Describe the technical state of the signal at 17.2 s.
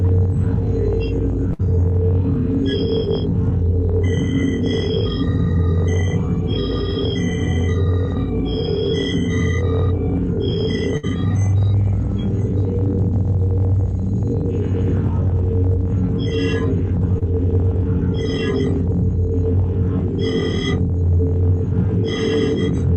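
At 17.19 to 17.23 s there's a short concealed packet loss: about 20 ms of audio didn't reach the decoder in time, so the receiver stretched the preceding sound across the gap and blended back in, leaving a brief smear or wobble right there.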